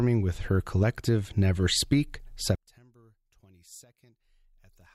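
At 2.55 s the speech suddenly collapses to a faint remnant and stays that way to the end, about 31 dB down. The likely cause is one channel inverted: one side of the stereo pair has flipped polarity, so when the two are summed to mono, everything they share cancels out. Centred speech and low end almost disappear, leaving only the small differences between channels as a weak trace.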